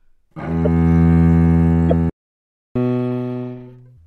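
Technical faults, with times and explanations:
0.65–0.67 s and 1.89–1.93 s: corrupt frame decoded. Damaged bits in a couple of frames each time put energy at the wrong frequencies, giving short noisy blips peaking near about -10 and about -5 dBFS.
2.10–2.76 s: playback stall. The sound cuts out for about 0.66 s mid-flow, likely because the player's buffer ran dry, then resumes.
2.76–3.97 s: catch-up at higher speed. The backlog is played back 1.5 times faster, raising the pitch by about seven semitones, until normal speed returns.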